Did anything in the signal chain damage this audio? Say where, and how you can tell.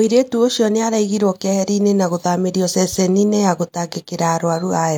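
No, nothing in this speech recording stood out on listening as damage from any stage of the signal chain.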